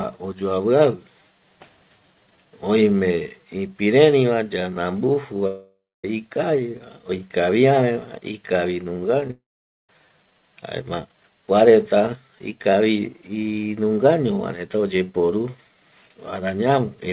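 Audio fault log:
5.47–6.05 s, long network dropout: the speech stops and its last sound is stretched into a fading buzz lasting just over half a second, with about 0.26 s of silence in it. The likely cause is a roughly 570 ms stretch of packets that never arrived. Speech resumes afterwards with that part missing.
9.21–9.23 s and 9.28–9.30 s, short concealed packet loss: two brief holes of about 10 ms each, both filled by extending the preceding sound and blending back in. Each is heard as a tiny smear or wobble in the speech just before the next gap.
9.31–9.90 s, long network dropout: right after those losses, about 580 ms of speech is gone. A short continuation fades into about 0.48 s of silence, likely from a lost burst of packets, and the speech then picks up further on. The G.711 A-law call path leaves nothing above 4 kHz throughout.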